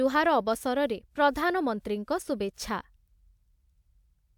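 No technical faults can be heard anywhere in the recording.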